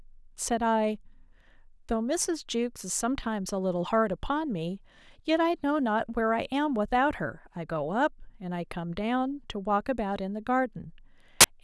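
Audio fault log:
11.41–11.44 s, file tags played as audio: right near the end of the speech there's a 35 ms blast of very loud white noise with hard edges. That's the embedded cover picture being read as samples, and its compressed bytes look random, so you get pure static.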